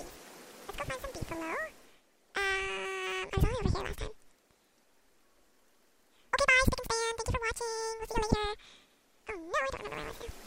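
Throughout, the audio was read two samples at a time, treating each pair as one frame, so it plays at double speed, 12 semitones higher.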